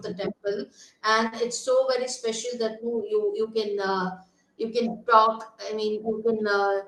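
At 1.27 to 1.35 s the speech has a short stall from a late packet. A packet arrived late and the jitter buffer ran dry. The receiver stretched the last sound by about 45 ms, then resumed where it left off. Nothing is lost. The sound just hangs briefly, with a faint buzz or dip.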